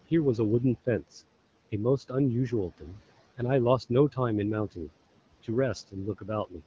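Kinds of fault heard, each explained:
Speech cut by the noise suppressor: near the end of the clip, at 6.18 to 6.29 s and again at 6.49 to 6.62 s, the suppressor mistakes quiet parts of the speech for background noise and turns them down with it, by about 12 dB and then about 16 dB. Each lasts roughly a tenth of a second. The sound fades and sounds swallowed rather than dropping to digital silence or glitching, which sets it apart from a packet-loss dropout.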